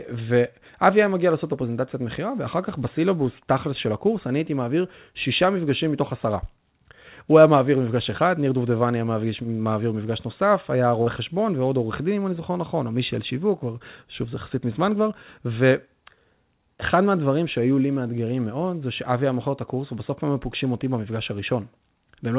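At 11.02 to 11.08 s, short concealed packet loss fills 40 ms by extending the preceding sound. It is heard as a brief smear and seen as a smooth, repeating patch on the spectrogram.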